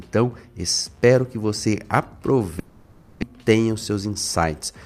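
From 2.59 s to 3.24 s the sound gives way to a smeared, buzzy continuation of its last moment that thins out over about 0.63 s, with no stretch of clean silence inside it. When the audio returns, roughly 0.6 s of material is gone. This is likely a long network dropout. The receiver kept extending stale sound until new audio arrived. A short packet-loss glitch would last only tens of milliseconds, and a mute would leave a clean silent gap.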